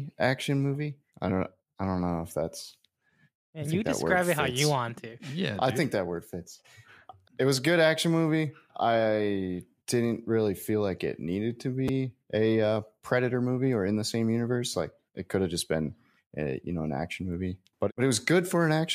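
At 11.88 s, between "like it needed to" and "a uh predator movie", chunks play out of order: a chunk of about 5.8 ms arrives one chunk late and plays after its successor. Unlike a dropout, nothing is missing. The speech briefly jumbles across the three hard joins.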